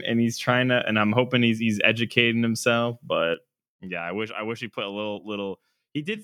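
A speech recording with a sudden gain jump at 3.34 s, right after "he's he's educating himself". The level drops by about 10 dB in a single step and stays down to the end. There is no fade. The speech and the background noise fall together, which points to a change in digital gain rather than at the source. The likely cause is a gain setting or bit shift applied from one sample to the next without a ramp.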